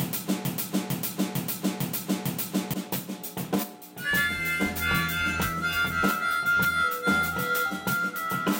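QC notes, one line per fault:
0.00–2.74 s, broken-record loop: the music is already caught in the loop when the clip begins, and a fragment of about 0.45 s repeats identically, back to back, five times before normal playback resumes at 2.74 s. The exact repetition means the player or stream likely stalled and kept re-sending the last buffered piece. Whatever music belonged in that span never arrives and is lost.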